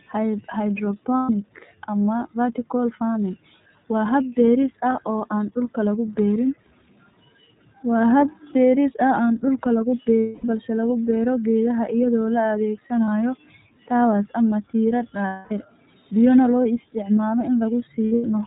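Throughout, the speech carries iLBC codec damage. Nothing above 4 kHz survives, and a plainly rough, slightly synthetic edge comes from each frame's excitation being coded independently. The texture points to iLBC's 30 ms frame mode at about 13.3 kbps.

Lost iLBC frames occur at 1.18 s (120 ms), 10.21 s (240 ms), 13.05 s (30 ms), 15.27 s (240 ms), and from 18.09 to 18.27 s as scattered dropouts, the longest about a tenth of a second. The decoder fills each gap by repeating the last pitch cycle mixed with noise, heard as a held, buzzy vowel that fades during the 240 ms losses. The voice is right again almost immediately afterwards.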